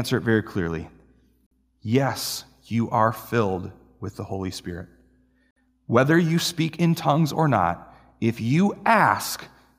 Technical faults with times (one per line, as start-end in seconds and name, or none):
1.46-1.51 gap between stream segments
5.51-5.56 gap between stream segments